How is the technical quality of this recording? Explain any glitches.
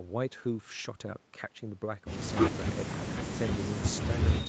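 No glitches can be heard anywhere in this speech recording. The sound has nothing above about 8 kHz, which fits the band limit of an Opus call codec working as expected, along with the coding texture such a call path normally adds.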